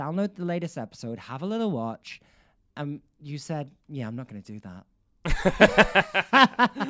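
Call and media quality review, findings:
Nothing to flag here: the speech comes through with no dropouts, glitches or other problems worth logging.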